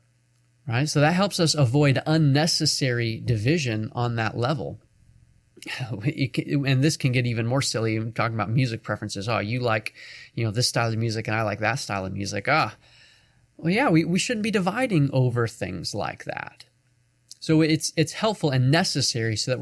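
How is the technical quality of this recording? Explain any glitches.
Listening through the recording, nothing stood out as a technical problem or glitch.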